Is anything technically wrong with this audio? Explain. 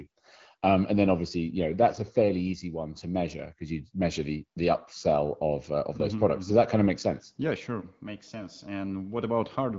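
No, nothing here points to a technical fault; it's just speech carried over an AMR wideband (HD Voice) link at 12.65 kbit/s, which is one of the rates where that codec keeps speech clear.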